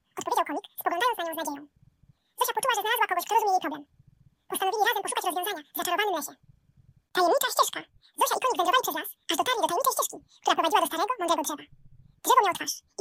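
From start to finish, the audio is read two samples at a time (double speed): pairs of samples are taken as single frames, so everything plays twice as fast and a full octave higher. A spectrogram shows every band shifted upward.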